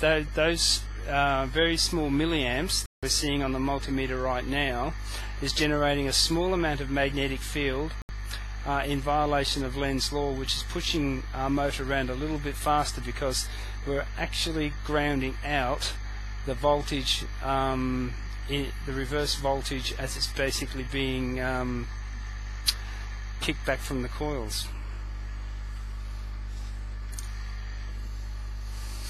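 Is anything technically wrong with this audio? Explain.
Yes, there are two digital broadcast dropouts, at 2.86–3.03 s (about 168 ms) and 8.02–8.10 s (about 72 ms): the receiver lost valid frames and muted, so the sound drops to silence and whatever was sent then is gone.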